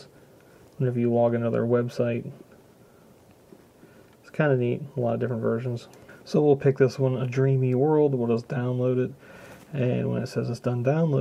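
Nothing goes wrong anywhere in this one; there's no glitch, dropout or other fault to point to at any moment.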